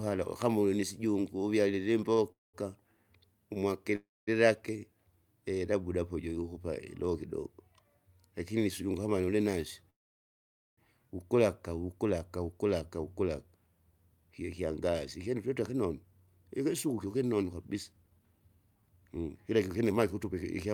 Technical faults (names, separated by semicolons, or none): short stall from a late packet; call audio freeze; jitter buffer speed-up